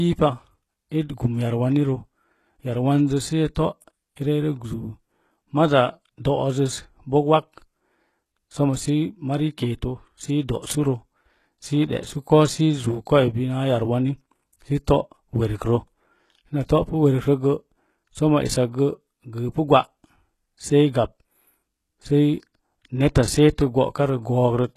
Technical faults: HE-AAC compression; pre-echo

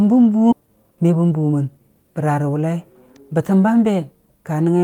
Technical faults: skip ahead; jitter buffer speed-up

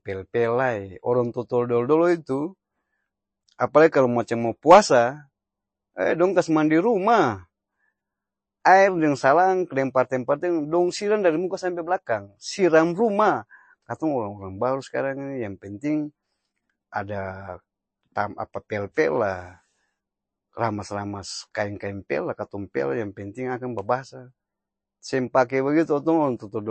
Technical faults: MP3 compression

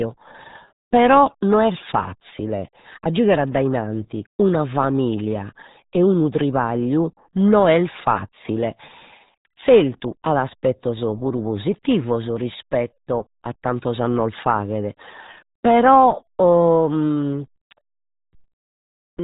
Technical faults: RealAudio 14.4 codec

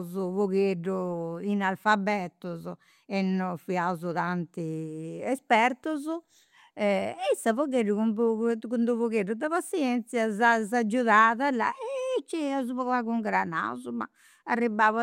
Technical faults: none

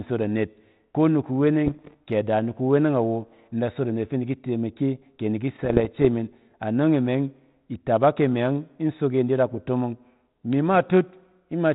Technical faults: bit errors on an ADPCM link

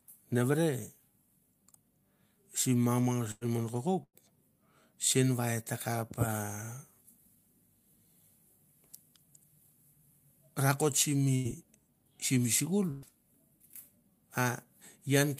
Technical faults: burst of packet loss; jitter buffer speed-up

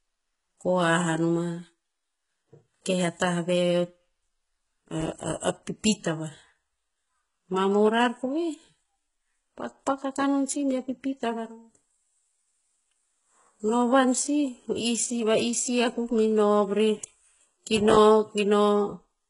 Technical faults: HE-AAC compression; processor overload crackle

